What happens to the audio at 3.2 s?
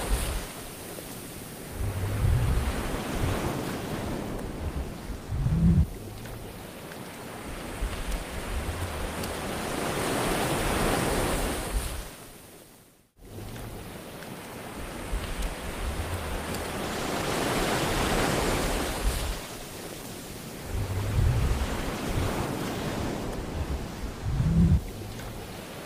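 Nothing goes wrong at 3.2 s: the audio runs through that moment intact, with no dropout, click, distortion or other fault to be heard.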